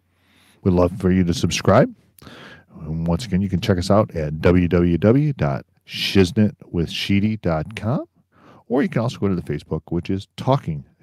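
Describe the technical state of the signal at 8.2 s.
At 8.2 s the speech signal is intact, with no audible fault at that moment.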